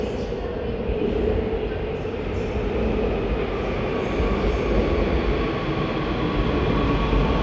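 A recording of everyday sounds, and nothing in it points to a technical fault at any point.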